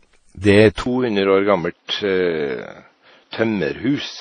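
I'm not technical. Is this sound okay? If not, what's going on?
No. From start to finish the sound has a watery, swirly edge, and nothing above about 9.7 kHz comes through. This is likely transcoding between lossy codecs: one compression format converted into another. Unlike a single poor conversion, two kinds of smearing are layered together.

At 0.84 s, right after "er et", there is a 20 ms gap. From then to the end the sound is duller and boxier, cut above 6 kHz, a bit quieter, with faint new background hiss. The likely cause is that the input switched to a poorer device. What separates this from simple muffling is the sudden change in loudness and background noise at the gap.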